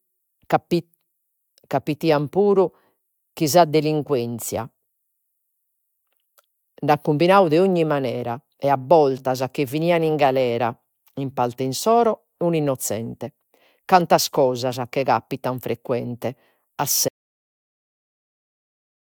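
A speech recording with an audio dropout to silence from 17.09 s to the end, about 2.05 s. The sound cuts off mid-flow into silence, with no room tone, unlike a natural pause or fade. The input was likely lost.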